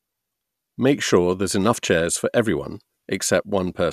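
Nothing here needs flagging; the speech runs its whole course without any technical fault turning up along the way.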